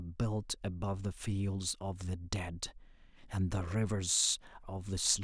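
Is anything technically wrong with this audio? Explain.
No, nothing is technically wrong with this audio.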